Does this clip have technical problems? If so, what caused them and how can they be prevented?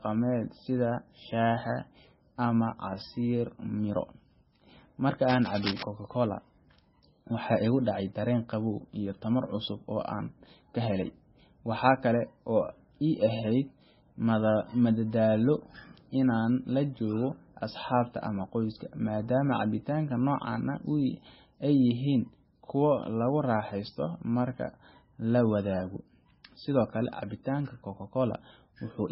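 Yes. Throughout the speech, heavy damage that is likely from MP3 compression removes everything above 5.6 kHz and leaves a watery, swirling texture. This points to a very low bitrate near 16.8 kbps. A spectrogram shows a hard ceiling at 5.6 kHz, with patchy holes flickering below it. Encoding at a higher bitrate, or keeping an uncompressed master, prevents this.

From 5.29 to 5.83 s, a rough rustling scratch sits about 10 dB below the speech. This is cable scratch noise, likely from a worn cable or connector whose contact shifted while being handled. The waveform shows dense, spiky bursts, and the spectrogram shows ragged broadband vertical streaks. Replacing or cleaning the connectors and securing the cables prevents it.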